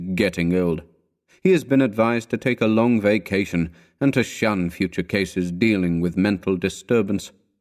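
No faults are present in this speech recording.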